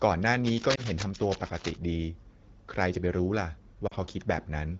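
From 0.4 to 1.77 s a dense, uneven scratching and rustling sits over the speech, fairly loud at around 10 dB below it. This is cable scratch noise, likely from a worn cable, connector or control being moved. Its contact resistance jumps about rapidly, and those fluctuations reach the signal as bursts of broadband noise for as long as the movement lasts.

Inside that stretch, between 0.75 and 0.81 s, the speech briefly dips and warbles, then recovers slightly rough. This matches lost AMR speech frames, and the short disturbance points to a single corrupted frame. After the frame failed its checksum, the wideband decoder filled the gap by repeating the last good pitch and vocal-tract settings at reduced gain. The same fault returns at 3.87 to 3.94 s. There the sound drops to near silence within the two lost frames, which fits two consecutive lost frames, before the speech comes back weak for a moment. 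The surrounding AMR wideband coding shows only light codec damage.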